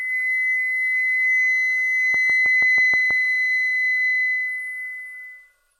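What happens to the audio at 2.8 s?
At 2.8 s the audio sits inside a train of clicks that runs from 2.14 to 3.12 s: about seven near-identical pulses at a regular 6.2 per second, peaking a few decibels above the surrounding sound. It is most likely interference or a faulty connection injecting the same impulse repeatedly, heard as steady ticking over the sound. A waveform shows evenly spaced sharp spikes, and a spectrogram shows thin vertical broadband lines at matching intervals.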